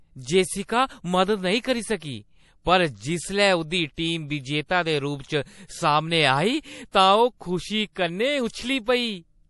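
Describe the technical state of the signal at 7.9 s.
Pre-echo runs from 7.93 to 7.96 s, about 33 ms ahead of an attack. The codec spread its quantisation noise across the whole block, so a short hiss precedes the onset and the attack sounds smeared. On a spectrogram, a thin broadband smear leads the transient. On the waveform, low-level fuzz sits before the sharp edge.

MP3 compression affects this moment as it does the whole clip. Nothing is present above 11.5 kHz, and weak components flicker in and out, which gives a watery, swirly quality that fits a bitrate near 48 kbps, likely from heavy encoding. A spectrogram shows a hard ceiling and patchy, blinking high bands.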